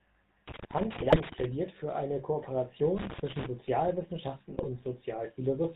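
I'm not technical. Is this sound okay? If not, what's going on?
No. The whole recording carries the sound of the GSM full-rate codec, the original mobile-phone voice coding. It rebuilds speech from a simplified model driven by regular pulses and cuts everything above 4 kHz, so the voice sounds buzzy, gravelly and dull throughout.

There are also two bursts of GSM bit errors, from about 0.94 to 1.18 s and from 4.52 to 4.70 s. Corrupted data reached the decoder there, scrambling its settings for pitch, tone and loudness, so the speech briefly breaks into squawks, pops and gargling.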